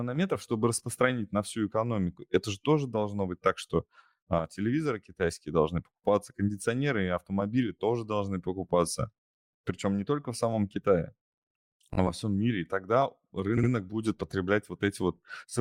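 Speech with repeated frames at two points: at 11.93 s, just before "во всем мире и", a 20 ms block plays twice more, adding 40 ms; at 13.57–13.70 s, after "всем мире и тогда", a 60 ms block repeats twice, adding 120 ms. Each stutter fits duplicated compressed frames.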